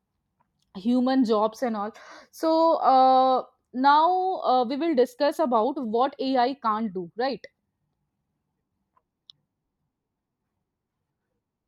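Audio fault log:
4.44–8.80 s time-stretched section: the speech abruptly runs 1.35 times faster at the same pitch. It sounds rushed, likely from short pieces being dropped.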